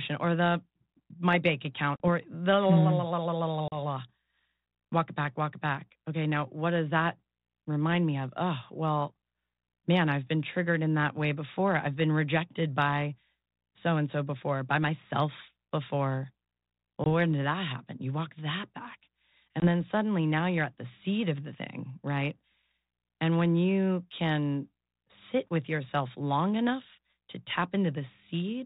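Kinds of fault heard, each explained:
Packet loss on an ADPCM call: small runs of packets were dropped and filled with silence, leaving hard-edged gaps of about 40 ms at 1.96 and 3.68 s and 20 ms at 17.04 and 19.6 s. The decoder's predictor and step size lose track of the sender's, so speech resumes slightly distorted, settling within tens of milliseconds.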